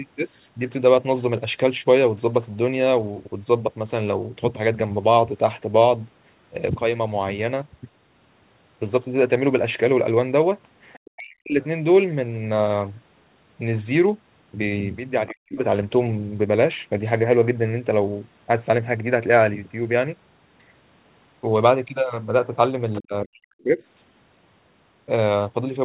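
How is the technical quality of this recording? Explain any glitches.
The recording has three short episodes where echo handling on the call fails. The speech runs through a narrowband call path with nothing above 4 kHz, which fits a G.711 mu-law codec at 64 kbps.

Other side's voice leaking through: At 10.93, 15.27 and 22.93 s, faint scraps of a second voice, lasting 60 to 80 ms, sit about 30, 25 and 20 dB below the speech. This is likely residual loudspeaker echo that the canceller missed. On a spectrogram it appears as thin, weak harmonic smudges.

Speech suppressed in double talk: From 11.06 to 11.59 s, 15.3 to 15.58 s and 23.01 to 23.79 s, right after each leak, the talker's level drops by as much as about 40 dB in choppy gaps. The canceller likely ducked both voices during overlap. The waveform shows sudden envelope notches, and the spectrogram shows near-blank bands.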